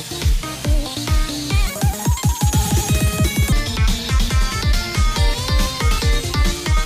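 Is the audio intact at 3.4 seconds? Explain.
No. At 3.4 s the audio is inside a section at the wrong speed, running from 1.67 to 3.52 s. It plays 1.8 times too fast, likely from being resampled against the wrong clock, so the sound is hurried and raised around ten semitones.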